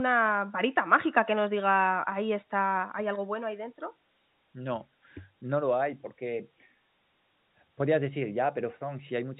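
There are no technical faults to describe in this speech, which has the narrow telephone-band sound of G.711 A-law coding at 64 kbps.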